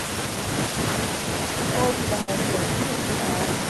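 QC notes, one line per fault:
0.54 to 3.69 s, echo leak: from about half a second in, a second copy of the speech trails the original by roughly 0.8 s, sitting around 10 dB down, so it comes across as a softer, delayed double rather than a room reflection. That gap points to the far end likely running on a loudspeaker with an echo canceller that isn't fully suppressing what its mic hears, so the leftover gets sent back down the line.
2.21 to 2.30 s, burst of packet loss: a short run of audio went missing here. For about 60 ms the receiver kept stretching the last bit of sound it had, letting it sag in level, which is why you hear a brief held, fading smear instead of fresh speech. Then playback jumps ahead, skipping roughly 60 ms of audio, so whatever fell in that stretch is simply gone.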